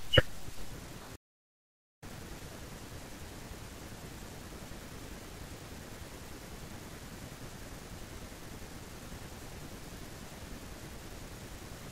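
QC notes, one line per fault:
1.16–2.02 s, audio dropout to silence: the speech cuts off abruptly and returns just as abruptly about 0.86 s later. The gap is silent, with no room tone or background hiss at all. That points to the input being lost while the recorder kept writing silence, likely from a momentary disconnect or an accidental mute. Whatever was spoken in that stretch is gone and cannot be recovered.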